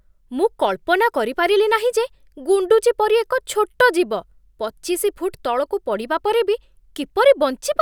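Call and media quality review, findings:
No faults found in the speech recording; nothing to attribute to capture, transport or playback.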